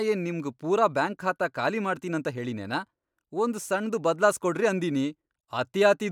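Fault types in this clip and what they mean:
Nothing in the speech stood out as a technical fault on listening.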